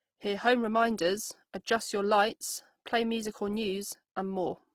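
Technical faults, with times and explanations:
Throughout, Opus compression: the speech sounds grainy and rough, with a noisy fizz across the full top end rather than swirling holes. This is likely Opus in its music mode filling starved bands with noise or folded content, which fits about 16 kbps.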